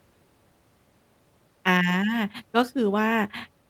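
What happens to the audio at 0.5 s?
Nothing goes wrong at 0.5 s; the speech runs through that moment intact, with no dropout, click or distortion.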